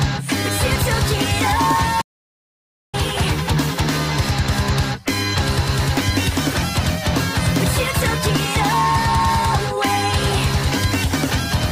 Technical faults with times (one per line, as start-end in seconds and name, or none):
2.01-2.95 playback stall